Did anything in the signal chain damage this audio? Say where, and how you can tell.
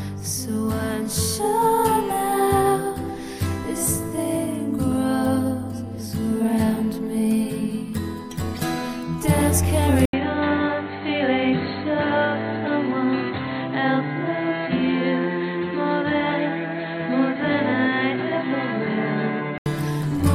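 Yes. At the driver stage, the input likely switched to a poorer device at 10.05 s, after an 80 ms gap. Until 19.66 s nothing reaches above 4.3 kHz, so the sound turns dull and boxy at much the same level, with a new noise floor roughly 50 dB down.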